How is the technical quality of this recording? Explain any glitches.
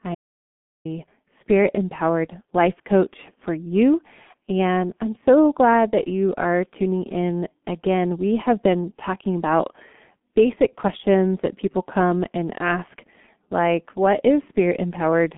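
The technical quality is poor. The whole recording carries low-bitrate codec damage, and there is one complete gap near the start.

Throughout, the sound has G.723.1 codec damage: the 6.3 kbit/s coding leaves only about 150 Hz to 3.5 kHz, with nothing above 3.8 kHz. That gives muffled, hoarse speech and smeared consonants. A plain low-pass filter would stay clear rather than grainy.

From 0.15 to 0.85 s, about 0.7 s, there is an audio dropout to silence. The input was likely lost while zeros were written. Unlike a quiet pause, even the room tone vanishes.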